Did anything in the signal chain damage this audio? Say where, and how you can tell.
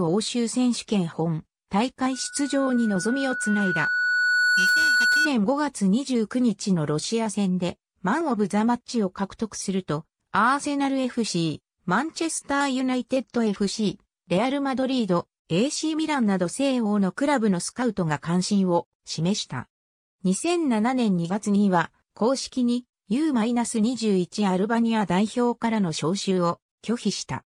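Yes. From 2.12 to 5.31 s there is a loudspeaker feedback squeal, which comes from the acoustic loop between the microphone and the loudspeaker it feeds. A single tone near 1.5 kHz swells steadily over roughly three seconds until it sits about 5 dB above the rest of the sound. This happens when the loop gain at that frequency exceeds one, so the tone keeps regenerating itself. On a spectrogram it is one bright horizontal line that thickens as it grows, and the waveform envelope fans out over the same span.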